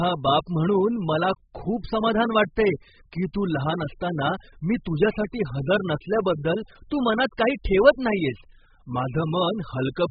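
The speech has likely passed through heavy AAC compression, the AAC-LC kind, at a bitrate starved enough to point to something near 8 kbps, and the damage runs throughout. With so few bits per frame, the encoder drops everything above 5 kHz and coarsely quantises what remains, leaving gaps in the spectrum. The result is dull and muffled, with sibilants reduced to a smeared fizz and a warbling, watery texture on sustained sounds.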